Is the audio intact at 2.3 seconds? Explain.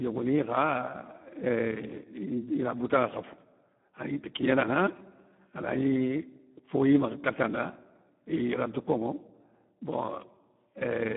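No. At 2.3 seconds, as across the whole speech clip, Speex codec damage is heavy: starved CELP excitation makes the voice hoarse and noisy, consistent with an 8 kbps setting. A spectrogram shows energy confined to roughly 150 Hz to 3.4 kHz, with nothing above 3.7 kHz.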